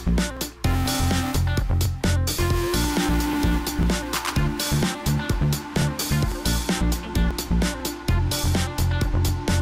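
From 0.37 to 9.29 s, periodic USB or driver dropouts skip a few milliseconds every 0.50 s: metronome-regular ticks, unlike random clicks, heard only under signal.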